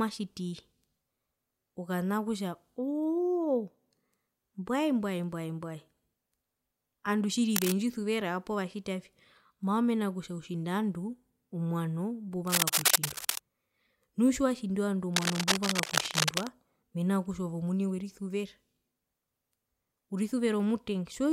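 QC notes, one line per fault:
7.55–7.75 s, 12.47–13.43 s and 15.14–16.47 s: cable scratch noise. Dense, ragged bursts of scratchy rustle land right after "andu tjiri" and "nu tjiwatjindi ovandu", sitting about level with the speech. That's likely a worn lead or connector being moved, its contact resistance jumping erratically.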